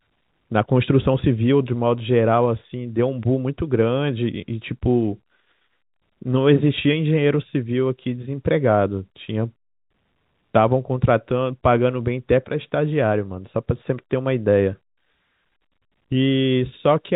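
The speech carries no technical faults; it comes over a G.711 telephone path, which fits A-law coding at 64 kbps, so the sound is narrowed to the usual band below 4 kHz, and any quantisation noise from the coding stays faint beneath the signal.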